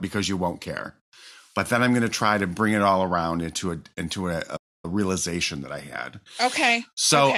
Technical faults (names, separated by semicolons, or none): playback stall